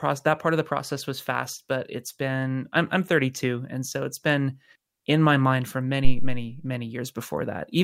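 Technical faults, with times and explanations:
6.05–6.50 s, phantom power thump: just after "in my mind for", a deep thump peaking at about −5 dBFS and dying away within about 100 ms. A supply switched on or off on a live input pushes a step through the coupling capacitors. Unlike a handling bump, it has no rustle or scrape.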